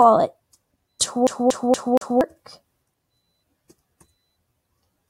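At 1.27 s the audio gets caught in a CD stuck on one turn. The same 0.24 s slice plays four times in a row until 2.21 s, each pass cut by a tiny mute as the laser jumps back. The result is that quick, even skipping-disc stutter.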